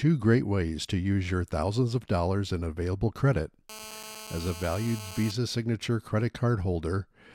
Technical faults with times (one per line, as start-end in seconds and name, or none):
3.69-5.31 GSM phone buzz